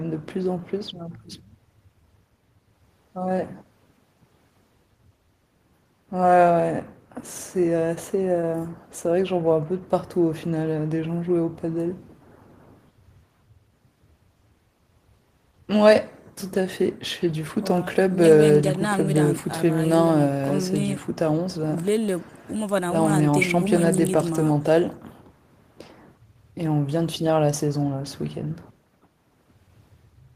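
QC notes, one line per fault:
No faults noted. The speech shows no audible technical problem at any point.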